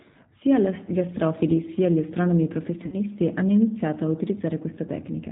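A speech clip squeezed through the G.729 codec at 8 kbit/s: everything above 4 kHz is gone, and the voice has that plainly audible rough, slightly synthetic edge. Around 2.86 to 2.97 s there's VoIP packet loss concealed by the speech codec. About 60 ms of audio goes missing, which fits two dropped packets. The decoder stretches the last sound into a fading buzzy tone or coloured noise and takes a moment to recover once audio returns.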